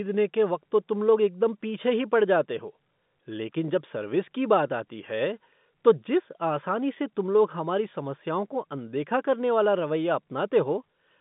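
No faults to report: the speech sits in an ordinary G.711 A-law telephone channel at 64 kbps, with the line band spanning 150 Hz to 3.6 kHz and nothing present above 3.8 kHz.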